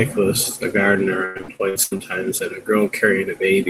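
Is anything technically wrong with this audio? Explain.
Yes. From 1.25 to 2.01 s, repeated packet loss (robotic sound) leaves gaps up to 99 ms. Each is patched by extending earlier audio, covering about half the stretch, so the speech turns choppy with pieces missing. A spectrogram shows smeared, repeated frames and breaks in the harmonics.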